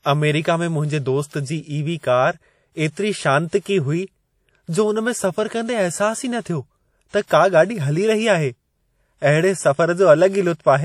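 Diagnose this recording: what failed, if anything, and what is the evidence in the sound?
The codec stage failed: the speech has been through a lossy transform encoder, likely WMA compression, at a rate low enough that the damage is plainly audible throughout, consistent with something around 48 kbps. Nothing reaches above 18.8 kHz, where the encoder has discarded the top band. Quantisation noise is spread across long transform blocks and weaker spectral detail is zeroed, so the voice carries a ringing, washy quality and a hiss that rises and falls with the signal.

Pre-echo is also a codec-stage fault, audible from 7.09 to 7.13 s. A sharp attack landed late in a transform block, and the encoder spread that block's quantisation noise evenly across all of it. The noise level sized for the loud onset therefore also fills the quiet stretch just before it, smearing about 48 ms ahead of the attack. 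This is heard as a brief hiss leading into the onset, which sounds softened rather than crisp.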